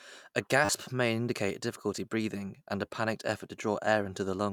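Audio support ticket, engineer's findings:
Repeated buffer at 0.65–0.69 s, 1.97 s and 3.38–3.40 s. Short speech fragment replayed with a hard join each time, heard as a buzzy stutter. Segment length fits a 10 ms playback buffer; first event repeats four times, dropping around 40 ms of audio. Likely an underrun: the device replays the last buffer when new data arrives late.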